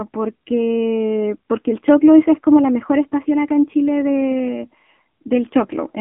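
Speech runs through an AMR narrowband mobile codec for the whole clip. The sound is boxed into a phone-line band of roughly 200 Hz to 3.5 kHz, with nothing at all above 3.7 kHz. That rules out crisp sibilants and air. The codec rebuilds the voice from a vocal-tract model fed by sparse pulses, so the damage is plainly audible as a coarse, synthetic buzz. That sound fits a low AMR-NB mode near 7.4 kbps.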